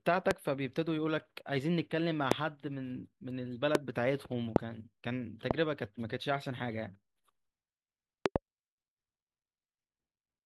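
Loud pops land at 0.31, 2.32, 3.75, 4.56 and 5.51 s, then a quick double pop from 8.26 to 8.38 s. Each is a sharp click jumping well above the speech, which keeps going underneath. The likely cause is a voltage spike from a plug, switch, static or driver glitch.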